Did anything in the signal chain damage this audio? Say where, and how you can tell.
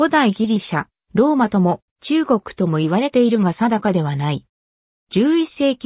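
No, nothing along the chain has left an audible mark, so there is no damaged stage to point to.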